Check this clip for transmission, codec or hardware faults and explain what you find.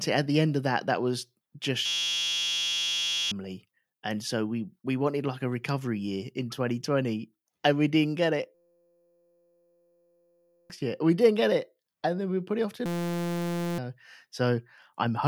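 There's one hardware fault here, a system hang loop, hitting three times: 1.86–3.32 s after "that that was just", 8.55–10.70 s after "we didn't get it", and 12.86–13.78 s after "put it off till". Each time the system froze while one 5.8 ms chunk, which fits a 256-sample buffer, kept replaying. That gives a steady 172 Hz buzz and drops about one to two seconds of speech.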